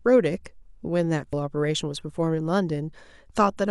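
Damaged data in a compressed stream produces a 4 ms blip at 1.33 s in this speech recording. Corrupted bytes there cause the decoder to misread frames and lose sync until it finds the next frame header.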